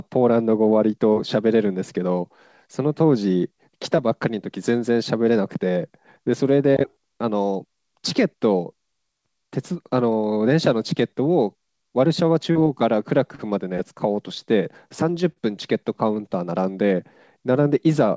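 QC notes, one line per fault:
12.52 to 12.58 s, short concealed packet loss: about 40 ms of speech never arrived in time, and the receiver patched the gap by carrying the last sound forward, so there's a brief smear before it blends back.
13.35 to 13.42 s and 15.32 to 15.39 s, short stall from a late packet: the jitter buffer ran dry, so the receiver held the last sound for about 36 ms and then 42 ms until the packet arrived. Nothing's lost, just a drawn-out moment with a slight buzz.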